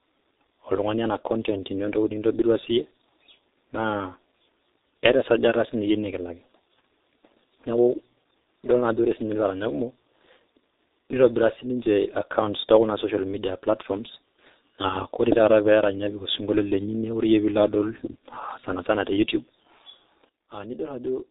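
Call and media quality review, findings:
G.723.1 codec, full clip: muffled, hoarse speech, smeared consonants; spectrogram blank above 4 kHz, blocky 30 ms frames; heavy damage at 6.3 kbit/s.

Sudden gain jump, 20.29 s to end: speech and background drop together by about 9 dB; waveform envelope steps down instantly; likely an unramped digital gain change.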